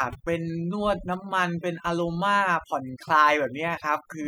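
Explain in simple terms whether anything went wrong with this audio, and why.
A noise reduction tool was pushed too hard across the whole recording, a case of overdone noise removal. It shuts off parts of the sound it mistakes for noise, so the background drops and breaks up into twinkling, warbling specks.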